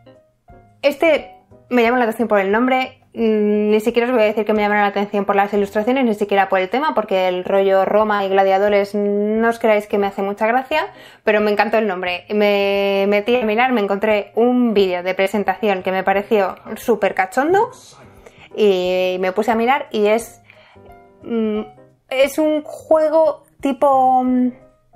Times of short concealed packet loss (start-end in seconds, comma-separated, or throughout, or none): 8.15-8.21, 15.23-15.28, 17.62-17.65, 22.21-22.25